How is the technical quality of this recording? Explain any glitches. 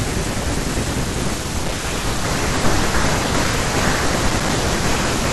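The recording has two short crackle bursts. Both are loose connector crackle, at 1.63 to 1.75 s and 4.29 to 4.49 s. A worn or dirty contact in the cable path keeps cutting in and out. That chops the speech and produces a rough, irregular scratching crackle.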